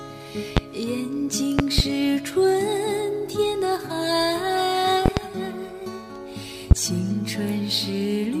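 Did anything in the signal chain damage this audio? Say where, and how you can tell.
Yes. A voltage step or pulse, likely from a plug, switch or static discharge in the analogue wiring, was added on top of the audio, giving a series of loud pops. A single pop lands at 0.57 to 0.60 s, a double pop at 1.59 to 1.82 s, another double at 5.06 to 5.21 s, and a single at 6.71 to 6.75 s. Each jumps about 20 to 25 dB above the signal, while the sound carries on underneath.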